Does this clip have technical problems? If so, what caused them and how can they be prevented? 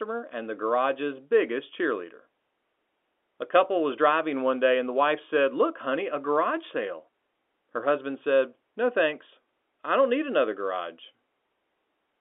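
No, no technical faults here.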